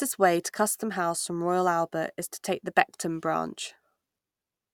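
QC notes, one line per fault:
No faults detected; the speech signal keeps an unbroken, continuous path throughout.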